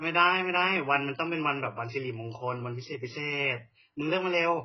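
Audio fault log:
throughout, AAC compression: the speech sounds dull and smeared, with nothing above 6 kHz and a warbling, fizzy texture on sustained sounds and sibilants. The likely cause is heavy AAC-LC coding at a rate near 12 kbps, which forces a low cut-off and coarse, gappy quantisation.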